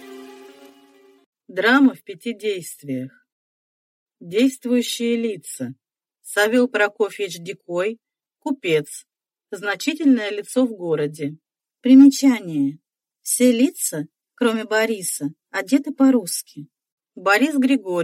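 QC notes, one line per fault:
No technical faults are audible; the signal holds steady throughout.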